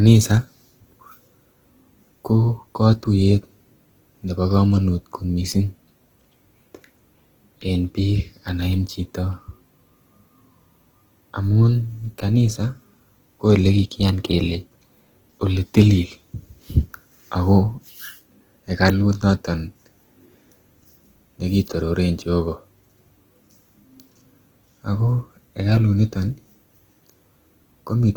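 A speech recording, with Opus compression damage running through the whole clip. The band does not narrow. Content reaches about 20.2 kHz. But the voice sounds rough and grainy, with a noisy, gritty texture in place of clean detail. This is likely an Opus encoder in its music mode, starved of bits. It keeps each band's energy but fills the missing detail with noise or copied lower bands. That fits a low bitrate, around 16 kbps.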